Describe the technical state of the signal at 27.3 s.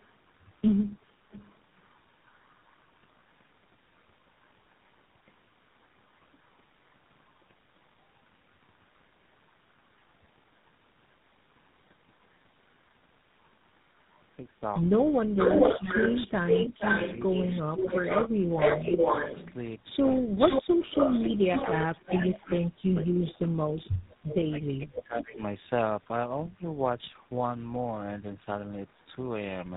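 At 27.3 s, the speech carries tandem speech coding, present throughout the clip. The sound points to three low-rate speech coders in a row: likely G.729A, then G.726, and finally GSM full rate, with G.711 links between them. Each coder compresses speech the previous one already degraded, so the damage compounds. Nothing remains above 3.8 kHz. The speech sounds muffled, rough and warbly, worse than any single coder would leave it.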